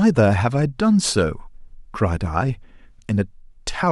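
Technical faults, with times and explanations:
Nothing stood out on listening to the speech in this recording.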